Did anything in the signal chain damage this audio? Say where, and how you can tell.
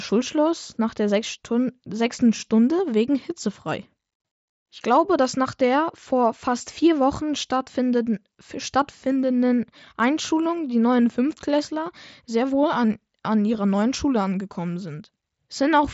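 No, nothing stood out on listening to this speech, which comes through the Bluetooth mSBC headset path as that codec normally sounds, with content stopping around 7.7 kHz.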